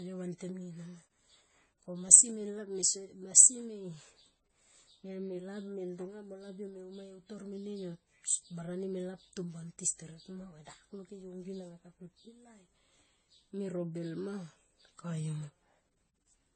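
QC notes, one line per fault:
Throughout: transcoding between lossy codecs. Nothing is heard above 8.4 kHz. Two sets of codec artefacts stack, likely AAC re-encoded to MP3, both sounding near 32 kbit/s.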